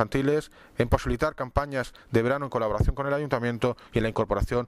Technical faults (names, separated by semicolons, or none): none